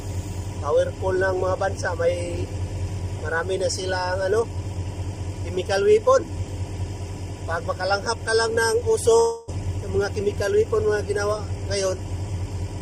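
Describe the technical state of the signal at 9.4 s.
At 9.4 s the signal sits inside a gap from 9.19 to 9.51 s, likely a long network dropout. About 0.28 s of audio never arrived, and the last sound is stretched into a fading buzz that covers about 0.28 s of the gap without falling to silence. Unlike a brief packet loss, it lasts for tenths of a second, and the lost stretch is skipped rather than delayed.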